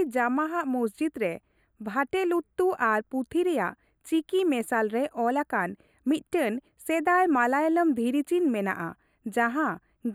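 One channel of this speech recording runs late by roughly a tenth of a millisecond, a delay of a few samples, and the two channels are summed to mono. This channel delay causes comb filtering throughout: fixed notches, the first near 5 kHz, leave the speech hollow and phasey.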